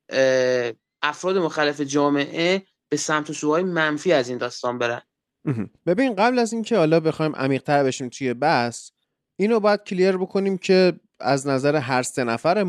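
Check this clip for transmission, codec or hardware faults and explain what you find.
No transmission, codec or hardware faults can be heard in this speech recording. There is nothing here that needs explaining.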